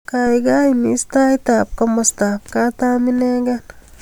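No technical faults are audible anywhere in this speech recording.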